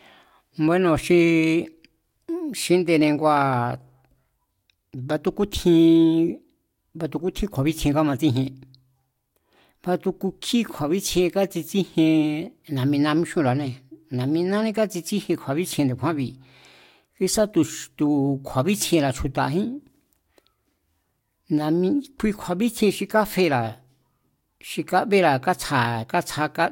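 No technical faults turn up anywhere in this speech recording. There is nothing here that needs a time marker or an explanation.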